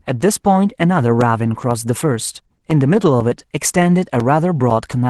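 A speech recording carries a steady run of small ticks or pops from 0.21 s to the end, one every 0.5 s. Each is a brief hole where a sliver of signal has been replaced by silence, and it stands out only while sound is present. That clockwork spacing points to periodic USB or driver dropouts: some background task stalls the USB bus or the audio driver on a fixed schedule, and a little audio goes missing each time. Two short patches, from 0.43 to 0.45 s and from 3.91 to 3.93 s, sound rougher and grainier for about 20 ms each, with no gap in the flow. In each case a lost packet was rebuilt from error correction. The Opus decoder, missing one packet, played the low-bitrate backup copy carried in the next packet, so the sound continues but loses detail and picks up noise for that frame. The call path through Opus caps the audio at about 12 kHz and adds the codec's usual coding noise, which fits a bitrate of around 24 kbps.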